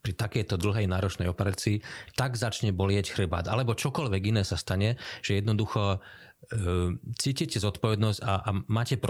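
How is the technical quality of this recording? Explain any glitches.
There is one glitch, a loud pop. From 1.54 to 1.56 s a single sharp pop sits a few decibels above the speech, which continues beneath it, likely from a voltage spike such as a switch or static discharge.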